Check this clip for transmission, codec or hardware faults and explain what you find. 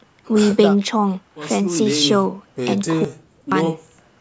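One fault stands out. From 3.05 to 3.52 s there is an audio dropout to silence. The speech stops mid-flow and about 0.47 s of it is gone. The gap is silent, with no room tone. The likely cause is a lost input while the recorder kept writing zeros. The call microphone processing, which stops at 8 kHz, is not a fault.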